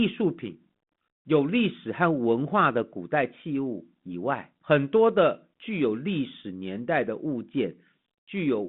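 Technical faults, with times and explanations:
No technical faults can be heard in this speech, so there are no times or explanations to give.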